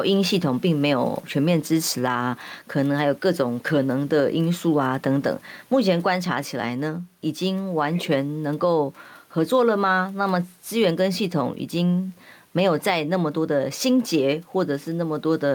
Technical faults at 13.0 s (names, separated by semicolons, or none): gain pumping